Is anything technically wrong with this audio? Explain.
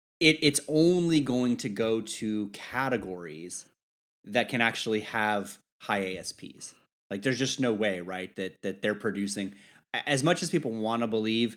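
No technical faults are audible.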